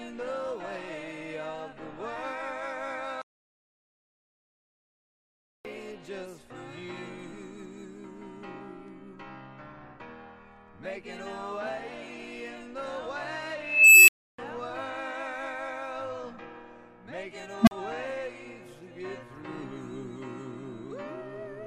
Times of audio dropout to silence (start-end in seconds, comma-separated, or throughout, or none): 3.22-5.65